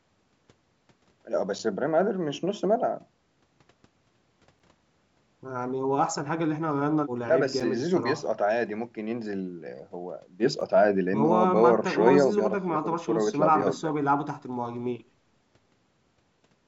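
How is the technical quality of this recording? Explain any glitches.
The recording has one recurring glitch: a gap between chunks, heard five times as brief dropouts in the speech.

The gaps fall at 1.59, 4.59, 7.60, 10.61 and 13.61 s, each about 6.5 ms of silence, spaced exactly 3.0 s apart. The audio was delivered in 3-second chunks, and a small stretch of silence was left at each join. No speech is lost; it is just interrupted, producing a short hole in the sound. On a waveform each gap is a thin flat line with abrupt edges. On a spectrogram it is a narrow vertical blank band cutting through every frequency. Because the call processing path passes nothing above 8 kHz, the bands stop at that ceiling.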